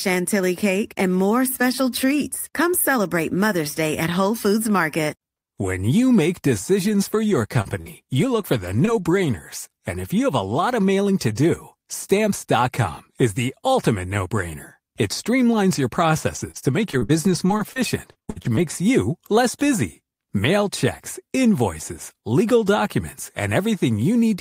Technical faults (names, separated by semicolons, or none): scattered short gaps; repeated packet loss (robotic sound)